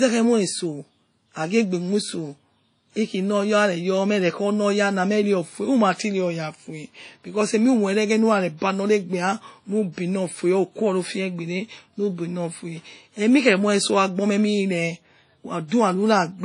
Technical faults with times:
0.00-16.44 WMA compression

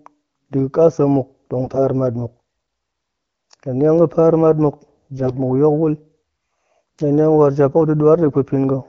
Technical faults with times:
1.64-1.78 AMR bit errors
5.18-5.37 AMR bit errors
8.26-8.36 AMR bit errors

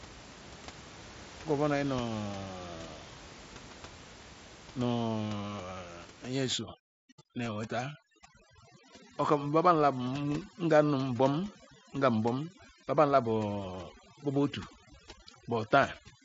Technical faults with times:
6.53-16.24 overdone noise removal

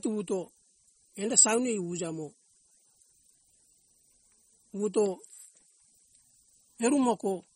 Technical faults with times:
0.00-7.55 MP3 compression

